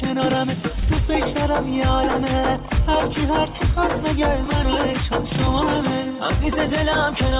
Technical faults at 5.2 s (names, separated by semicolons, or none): none